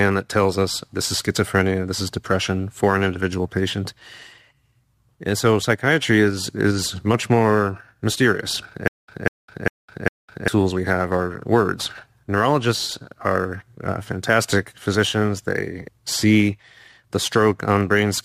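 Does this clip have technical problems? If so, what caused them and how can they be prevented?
Yes. From 8.88 to 10.48 s there is a stutter with silent gaps: a 194 ms burst of sound plays four times, each followed by about 207 ms of digital silence, repeating every 401 ms. The likely cause is a stalled player or stream replaying its last buffered fragment at each retry before running dry, so the audio due in that span is lost. On a waveform, identical blocks alternate with flat silent gaps; a spectrogram shows matching vertical slices separated by empty columns. Larger buffering and reliable network or disk throughput prevent it.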